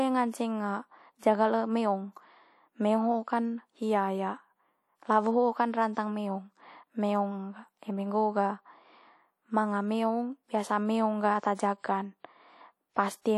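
Throughout the speech there is WMA compression damage, most likely from a transform encoder at a low rate; the plainly audible coding noise fits a bitrate around 48 kbps. The sound has a ringing, washy quality, with hiss that swells and fades with the signal. On a spectrogram, faint upper detail appears blotchy and fragmented, with gaps where weak components were zeroed and noise smeared sideways in time around louder energy.

The first pre-echo runs from 1.19 to 1.22 s, spreading about 38 ms ahead of a sharp attack. The encoder's block spanned both the quiet moment and the onset, so noise sized for the loud part leaked backwards into the silence before it. It is heard as a brief hiss just before the attack, which itself sounds softened. On a spectrogram, a faint broadband haze precedes the onset's vertical edge.

The second pre-echo, from 11.55 to 11.59 s, spreads about 41 ms and has the same mechanism: quantisation noise distributed across the whole transform block fills the gap before a transient. 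Again a short smear of hiss anticipates the attack and blunts its crispness. On the waveform, low-level fuzz appears in what should be near-flat signal just before the amplitude jumps, instead of a clean step.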